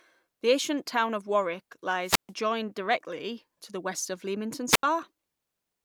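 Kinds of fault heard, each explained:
Wireless microphone squelch dropout: the radio link weakens, hiss rises, then the receiver mutes entirely, leaving 136 ms of near silence at 2.02 s and 78 ms at 4.68 s. That hiss before each hole distinguishes it from a clean digital dropout.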